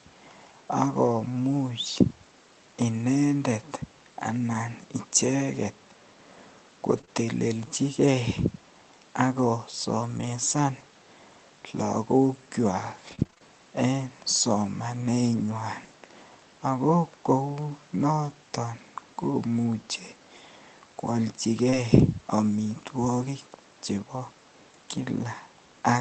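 Speech, carried over an Opus call link whose top end stops near 8 kHz, with its usual layer of coding noise. A lost packet rebuilt from error correction can be heard four times. The first is at 4.53 s, then 6.97 to 6.99 s, 10.17 to 10.27 s, and 21.72 to 21.74 s. Each spot was lost, then played from a low-bitrate copy carried in the next packet. So nothing drops out. The sound just turns rougher and noisier for about 20 ms, or about 60 ms at 10.17 s.

Short concealed packet loss follows straight after the 6.97 s repair. It runs 7.01 to 7.05 s and again 7.05 to 7.09 s. It occurs once more at 21.70 to 21.74 s, overlapping the last repair. Each hole is about 20 ms that arrived too late. The decoder stretched the last sound to cover it, then blended back. It comes across as a brief smear or wobble, and a quick consonant may vanish.

Repeated packet loss, with its robotic sound, fills 13.07 to 13.42 s. 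Six short gaps, none longer than about 21 ms, land close together. Around a third of that stretch is patched-in sound. Some of it was rebuilt from the backup copies. Each patch barely settles before the next hole arrives. The result is choppy, with pieces missing.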